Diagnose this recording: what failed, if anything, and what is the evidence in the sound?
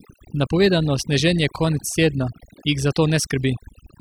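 A noise suppressor in the call-processing stage was set far too aggressively, causing overdone noise removal throughout the speech. Bands near its noise estimate are pulled down or gated off, taking quiet parts of the voice with them, so the background drops and breaks up into twinkling specks.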